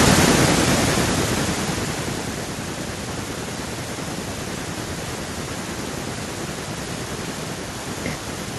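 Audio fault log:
0.05–2.62 s, automatic gain falling: speech is eased down about 15 dB by the gain control, its background sinking with it in one steady drop, not pumping.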